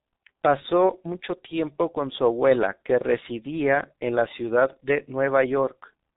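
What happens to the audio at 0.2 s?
At 0.2 s the speech carries heavy G.723.1 codec damage, present across the whole clip. Nothing reaches above 3.8 kHz, and the coarse 30 ms frames, at a rate that fits about 6.3 kbit/s, blur consonants into a hoarse, muffled sound. A plain low-pass filter would dull the top without this roughness.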